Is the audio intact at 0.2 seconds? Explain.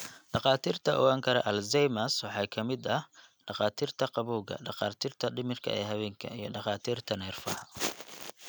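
Yes, at 0.2 seconds the speech plays through cleanly with no audible fault.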